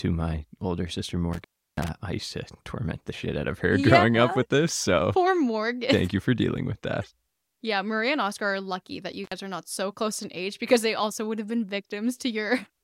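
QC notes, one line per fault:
1.33–1.88 s, intermittent contact: the audio drops out for about a third of a second right after "my older sister" and comes back before "I used to torment". There's crackle at each edge and faint hiss in the gap, which is a loose plug or cable briefly opening the line.
9.24–9.32 s, intermittent contact: the same fault again, shorter at about 60 ms, between "are lucky that you" and "are not so close". It's a quick crackly blip as the connection opens and recloses.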